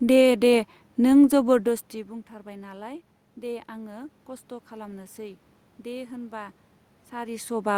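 Speech recording with no technical faults to report.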